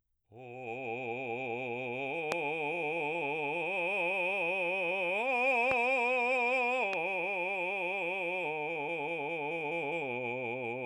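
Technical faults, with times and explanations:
2.32–2.34, 5.71–5.74 and 6.93–6.95 s, loud pop: single sharp pops over the continuing music, about 20, 20 and 15 dB above it, likely from a voltage pulse such as a switch or static discharge. Each appears as a narrow spike on the waveform and a thin vertical broadband stripe on the spectrogram.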